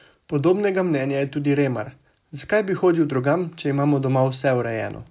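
No technical faults can be heard anywhere in the recording; the speech signal stays intact and continuous throughout.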